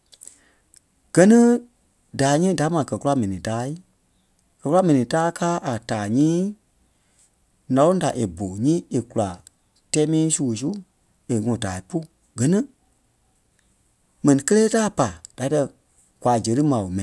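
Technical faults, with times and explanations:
Nothing faulty can be heard in this speech recording.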